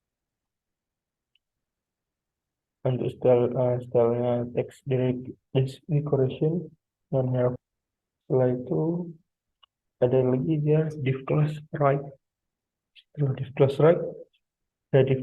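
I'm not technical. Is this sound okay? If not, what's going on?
No. At 7.55 s the sound suddenly jumps ahead with a small blip, likely a stream segment skipped, where a missing chunk was passed over.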